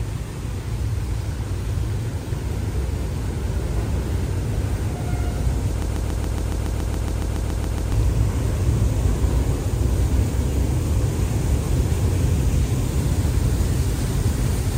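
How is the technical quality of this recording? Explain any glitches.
A broken-record loop runs from 5.82 to 7.92 s. A fragment about 140 ms long repeats 15 times, back to back and identical each time, for about two seconds. This is likely a stall in the player, encoder or stream. It kept re-sending the last short piece of audio it held instead of moving forward. The result is a rapid stutter at roughly seven repeats per second, and whatever should have played during those two seconds is missing.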